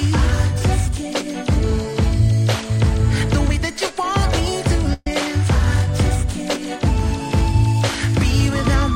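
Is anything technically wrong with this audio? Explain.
Yes. From 4.93 to 5.07 s there is a burst of packet loss. Consecutive packets arrived too late or not at all. The receiver extended the last sound for about 126 ms, fading it, with a brief silence. The audio then resumes 130 ms later.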